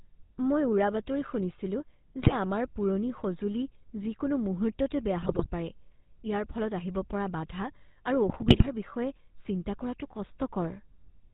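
Throughout, the GSM full-rate codec gives the speech a buzzy, gravelly roughness, with a spectrogram showing nothing above 4 kHz and pulse-driven harmonic smearing. At 2.22–2.35 s, 5.22–5.47 s and 8.28–8.69 s, GSM bit errors corrupt the decoder's parameters, producing squawks and gargling, with level spikes and distorted spectral bands.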